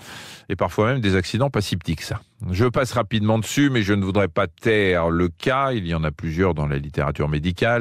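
Between 3.44 and 3.57 s, after "passe rapidement", DAB burbling puts short blips of noise over the speech. Residual bit errors make single sub-bands jump in level.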